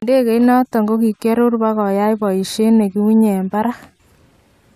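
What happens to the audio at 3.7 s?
Nothing goes wrong at 3.7 s: the speech carries on intact through that moment, with no fault to be heard there.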